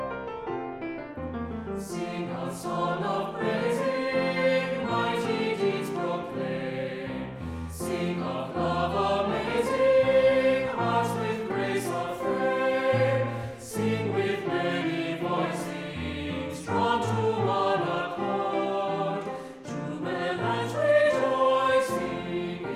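No technical faults are audible.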